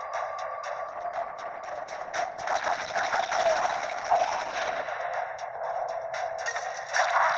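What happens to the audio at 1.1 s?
Coding artefacts rise abruptly and without a gap, from 0.87 to 4.87 s. This is an adaptive stream at a lower bitrate: the player switched to a cheaper encoding, consistent with a fall to around 12 kbit/s.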